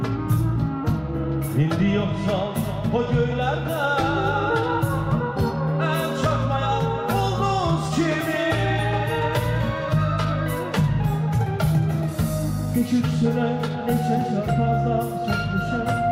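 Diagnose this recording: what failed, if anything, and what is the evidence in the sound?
Nothing in the signal chain fails audibly here: the level holds steady, the waveform stays continuous, and there are no gaps, bursts or shifts in timing or tone anywhere in the recording.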